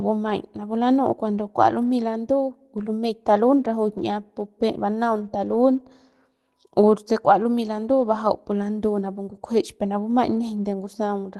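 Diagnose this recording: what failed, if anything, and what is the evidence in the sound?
The fault sits at the network stage of an Opus call path with a bandwidth of about 12 kHz. It is heard as a lost packet rebuilt from error correction, twice in this speech: 1.81 to 1.83 s, and 5.47 to 5.53 s. There is no dropout. Each span turns briefly rougher and noisier. The packets never arrived, so the decoder played the low-bitrate redundant copies carried in the following packets. The lengths fit one 20 ms packet and then two.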